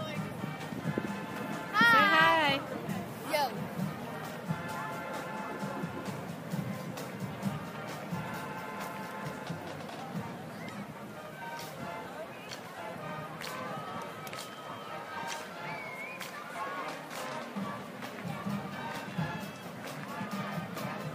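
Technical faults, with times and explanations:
No technical faults can be heard in the clip.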